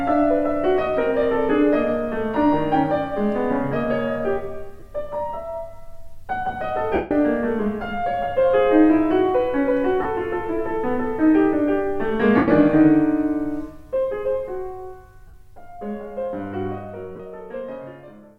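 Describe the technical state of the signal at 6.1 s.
At 6.1 s the signal is intact, with no technical fault present at that moment.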